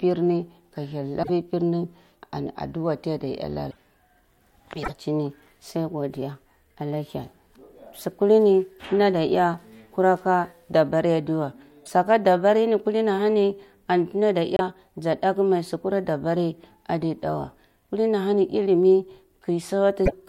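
At 1.22, 3.70, 4.82, 11.85, 14.57 and 20.05 s, the speech briefly breaks up for 44 to 84 ms and skips ahead, likely a broken MP3 bit reservoir after dropped 26.1 ms frames.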